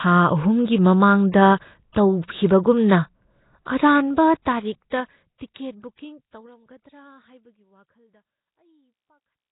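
Right from the start the speech has that rough, hissy, underwater smear and nothing above 3.9 kHz, with heavy damage that likely comes from Nellymoser compression, fitting a 16 kbps stream. Pre-echo shows up at 1.32–1.34 s, 1.93–1.96 s, 4.90 s and 5.38–5.41 s: short hiss smeared ahead of sharp attacks, because block-wide quantisation noise leaks into the quiet moment before each one. Overlapping the last two, the smooth fade-out is running from around 4 s to the end.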